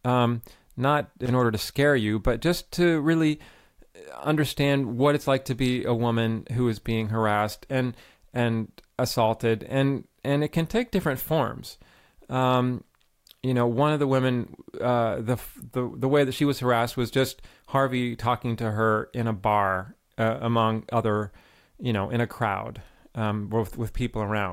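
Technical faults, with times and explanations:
1.26–1.32 s, loose connector crackle: between "um not" and "order to scare you", a worn or dirty contact repeatedly makes and breaks, chopping the speech into a ragged scratchy burst. Unlike a single digital click, it is irregular and gritty, like a cable being jostled.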